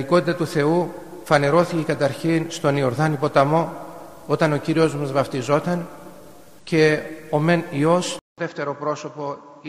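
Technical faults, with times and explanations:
8.19 to 9.69 s, input switched to a poorer device: after a gap of about 0.19 s, the sound returns dull and boxy, roughly 10 dB quieter, with nothing above 7.6 kHz and a faint new noise floor well below the signal. This is likely a change of capture device, whose narrower band and different gain replace the original path. On a spectrogram, a blank column marks the gap, then the upper band stops abruptly; the waveform resumes at a visibly smaller amplitude.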